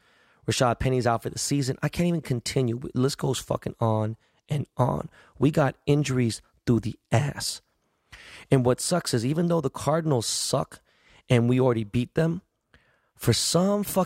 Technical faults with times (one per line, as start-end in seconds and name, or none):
none